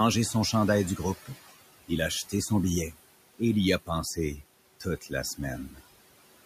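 Noise suppressor artifacts run through the whole clip. The room's steady background, about 17 dB below the speech, is pulled down by about 20 dB in each band the processing takes for noise. The noise sinks in the gaps and rises under the speech.

Speech cut by the noise suppressor occurs from 4.8 to 5.12 s and again from 5.69 to 5.81 s. The suppressor mistook quiet parts of the speech for background and turned them down, by up to about 13 dB in the first stretch and about 9 dB in the second, so short pieces sound swallowed and faint.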